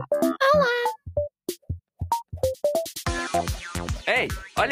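No dropouts, glitches, distortion or timing errors are audible anywhere in the clip.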